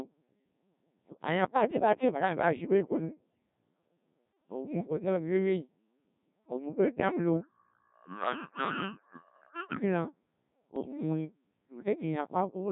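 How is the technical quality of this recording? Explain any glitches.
The technical quality is poor. The whole recording has passed through a very low-rate digital voice codec, and it has two short bursts of corrupted radio data near the end.

Codec 2 vocoder, throughout: at 1.3 kbit/s, only pitch, voicing, energy and a coarse spectral envelope are transmitted, and the decoder rebuilds the speech from sine waves. The original waveform is gone, so the speech sounds heavily robotic and buzzy, with smeared, synthetic-sounding consonants and vowels.

Bit errors on digital voice radio, 9.09 to 9.25 s and 10.76 to 10.97 s: the audio abruptly jumps in pitch, level and timbre, breaking into warbles and bleeps. Each of these bursts fits a handful of corrupted frames at an error rate of roughly 7 percent. At such a low bitrate, every flipped bit alters the pitch, loudness, voicing or spectrum of an entire frame.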